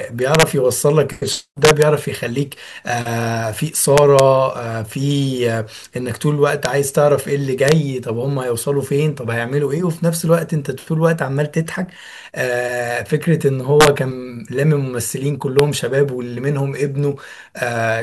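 A gain stage let loud speech peaks exceed the integer limit and wrap to the opposite sign instead of limiting. This integer overflow produces harsh cracks, sharper than clipping, at 0.35–0.43, 1.65–1.82, 3.98–4.20, 6.65, 7.68–7.72, 13.81–13.87 and 15.59 s, with peaks only about 0 to 3 dB over the limit.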